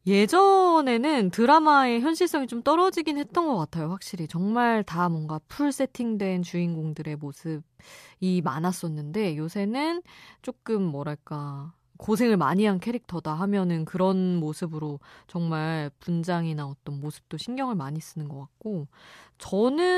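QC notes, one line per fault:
No faults found in this speech clip. Nothing needs logging for QC.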